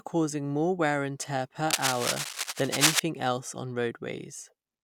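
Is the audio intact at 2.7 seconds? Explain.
No. At 2.7 seconds the speech is covered by cable scratch noise, running from 1.70 to 3.00 seconds. It sounds like dense, ragged scratching and rustling at roughly the level of the speech. The likely cause is a worn cable or connector being moved, its contact resistance flickering.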